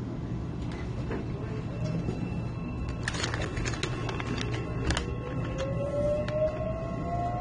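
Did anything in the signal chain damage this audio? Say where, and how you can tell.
Yes. From start to finish the sound is dull and smeared, with the top end cut off early and a warbling, fizzy texture wherever energy sustains. That damage happened at the codec stage and is likely AAC compression at a low bitrate, roughly what 32 kbps AAC-LC would give. With so few bits, the encoder lowers its bandwidth and coarsely quantises or drops the frequency lines that its hearing model ranks as least important.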